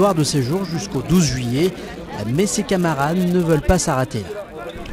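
Right from the start there's a steady buzz at about 188 Hz riding on everything, and that's the classic sign of a filter restarted on every block. The filter drops its internal state at each block boundary and begins again from silence, so every block opens with a tiny transient. Those transients line up into a regular tick rate that fits a 256-sample block, and the buzz gets louder and quieter along with the sound itself.

Then from 1.56 s to 2.25 s there's a rough, irregular burst of crackle and scratching laid over the top. That's loose connector crackle. A worn or dirty contact is making and breaking as it shifts, chopping the signal on and off in quick, uneven bursts, and any DC sitting on the line turns those breaks into little pops. Unlike the block buzz, it has no steady rhythm, just a ragged spell of about 0.7 s.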